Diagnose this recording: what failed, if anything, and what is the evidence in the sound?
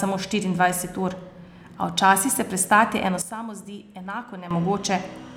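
At 3.22 s the level of the speech and the background noise drops together by about 12 dB, and at 4.51 s both step back up again. This is a sudden gain jump, likely from a digital gain setting in the processing chain being changed between one sample and the next with no ramp. On the waveform the envelope steps down and back up abruptly at those two points. On a spectrogram the whole band, noise floor included, darkens evenly between 3.22 s and 4.51 s.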